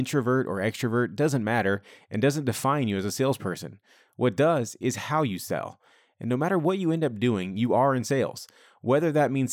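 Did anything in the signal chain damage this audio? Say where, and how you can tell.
No, nothing in the chain audibly damaged this speech recording, and the signal reaches the listener intact at every stage.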